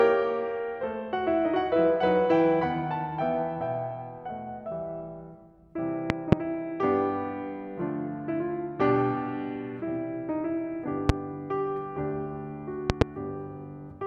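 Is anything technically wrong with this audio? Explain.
Yes, the music is broken three times by a loud pop. At 6.1 to 6.35 s and again at 12.9 to 13.04 s there are two sharp pops in quick succession, and at 11.09 to 11.12 s there is a single one. Each stands roughly 25 dB above the music, a hard click-thump while the playing carries on underneath. The likely cause is a sudden voltage step or spike, from a plug, a switch, static discharge or a driver glitch, entering the signal path, with the following circuitry shaping each spike into a short pulse.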